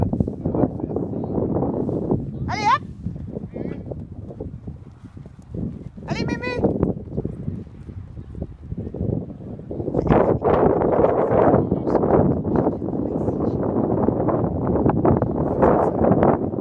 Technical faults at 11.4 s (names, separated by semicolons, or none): none